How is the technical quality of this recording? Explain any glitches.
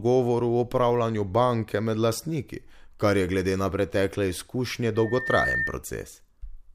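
The recording has one clear glitch, a loudspeaker feedback squeal. From 4.95 s to 5.79 s, just after "glede na pretekle izkušnje", a microphone re-amplifies its own loudspeaker output, so a 1.8 kHz tone swells over roughly 0.4 s until it is as loud as the speech. On a spectrogram it appears as a single bright horizontal line that strengthens. In the waveform, the envelope bulges into a steady oscillation.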